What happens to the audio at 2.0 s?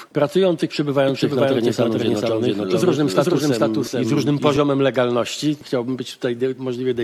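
At 2.0 s the audio is heard twice, as a doubled audio track running from 1.09 to 4.57 s. A second full-band copy trails the original by roughly 0.4 s at about equal level, with no decay or room colour, and it starts and stops abruptly. It is likely a second capture through a slower path.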